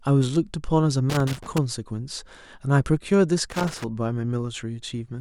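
A worn or dirty contact in the signal path is making and breaking as it shifts, which chops the speech recording: loose connector crackle, heard as irregular scratchy bursts from 1.10 to 1.58 s and again from 3.50 to 3.84 s.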